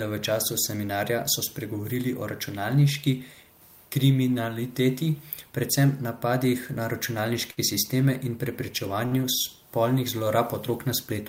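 At 7.51 to 7.60 s and again at 9.06 to 9.19 s, the speech has a short stall from a late packet. The jitter buffer ran dry, so the receiver stretched the preceding sound by about 59 ms and then 56 ms, giving a brief held sound with a faint buzz or dip. Nothing is lost, and timing resumes from the same point.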